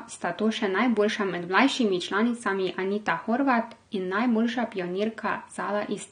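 From start to finish the speech carries plainly audible AAC compression damage, likely from AAC-LC coding at a low rate that fits about 32 kbps. At that rate the encoder cannot spend enough bits on each frame's spectrum, so detail is discarded against its masking model. The upper range sounds dull and smeared, and sustained vowels and sibilants take on a warbling, fizzy texture as spectral content shifts from one frame to the next.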